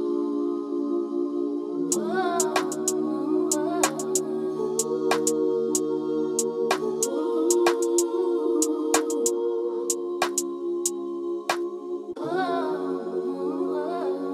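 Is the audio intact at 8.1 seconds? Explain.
Yes, the audio is intact at 8.1 seconds, with no dropout, click, distortion or other fault to be heard there.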